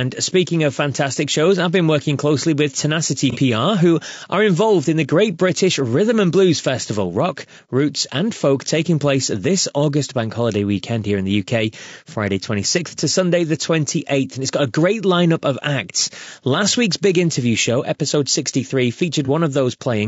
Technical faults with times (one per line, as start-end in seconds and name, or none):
0.00-20.07 low-delay AAC compression
3.31-3.37 AAC frame loss with concealment
19.25-19.29 AAC frame loss with concealment